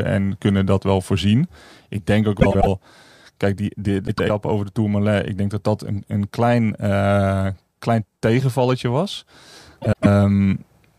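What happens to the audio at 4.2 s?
At 4.2 s the speech falls inside a burst of frames out of order, running from 4.07 to 4.30 s. Two adjacent blocks of about 104.5 ms each, which fits runs of four frames apiece, were decoded in swapped order, so the stretch plays second half first. It sounds like a garbled flutter. Unlike a dropout or a stutter, nothing is missing or repeated and no time is lost.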